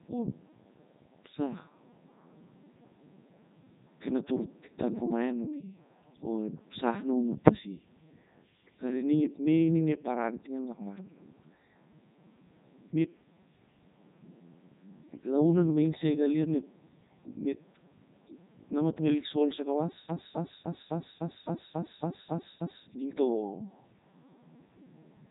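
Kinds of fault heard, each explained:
Codec 2 vocoder: speech resynthesised from pitch, voicing and envelope as sine waves, heavily robotic and buzzy, nothing above 3.8 kHz, fitting a 3.2 kbit/s mode.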